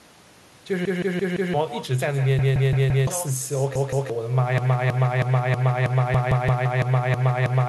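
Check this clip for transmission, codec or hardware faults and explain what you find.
Three faults are present: an uncancelled echo over the whole clip, four stretches where a buffer repeats, and a loop that runs to the end.

Echo with no canceller runs throughout. At the far end the call plays from a loudspeaker, the microphone picks it up again, and nothing subtracts it. The speech therefore returns after roughly 150 ms, about 16 dB below the direct sound. Every phrase is trailed by a fainter, thinner copy.

Repeated buffers occur at 0.85–1.54 s, 2.39–3.07 s, 3.76–4.10 s and 6.14–6.66 s. Each time, fresh audio missed its deadline, so the device replayed its last block of about 0.17 s, which fits an 8192-sample buffer. That block plays four extra times in the first two events, twice in the third and three times in the fourth. Each repeat ends in a hard join, producing a choppy stutter. 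Roughly 0.7 s, 0.7 s, 0.3 s and 0.5 s of new audio is skipped.

A broken-record loop starts at 4.58 s and lasts to the end. A fragment of about 0.32 s repeats back to back ten times, with the 6.14 s buffer repeat falling inside it. The likely cause is a stalled player, encoder or stream that kept sending the last fragment it held. The sound cycles mechanically with no new material, so everything after 4.58 s is lost.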